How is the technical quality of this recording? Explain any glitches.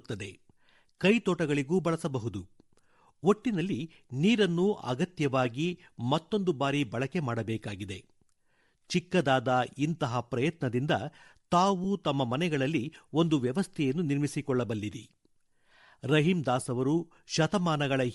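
The technical quality is compromised by codec damage that runs through the whole speech recording, plus one brief dropout.

Bluetooth LC3 compression is plainly audible from start to finish. The voice has a breathy, grainy edge. The upper frequencies sound thin and hissy rather than clean. This is likely LC3, the Bluetooth LE Audio codec, run at a tight bitrate. The sound fits a setting around 48 kbps with short 7.5 ms frames. At that rate the encoder discards much of the high band and fills the gaps with noise.

A lost LE Audio frame occurs at 11.84 s. It lasts about 7.5 ms, which fits a single missing frame. The decoder had no new data for that instant. It repeated the previous spectrum with scrambled phase instead. The result is a tiny noisy smear in place of the speech. The gap is too short for the concealment to fade out, so it passes as a brief rough blip.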